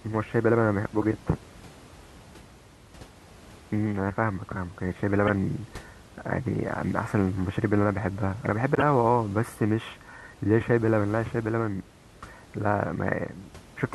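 Speech, with room noise about 23 dB below it. Damaged data in the compressed stream causes brief glitches at 1.02–1.04 s, 5.27–5.30 s and 8.75–8.82 s. Corrupt frames break decoder sync, producing blips.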